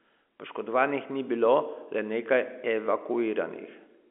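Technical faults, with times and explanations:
Nothing's wrong here; the speech comes through a G.711 phone line, so it sits in the usual narrow telephone band of roughly 250 Hz to 3.4 kHz, which is just how that line sounds.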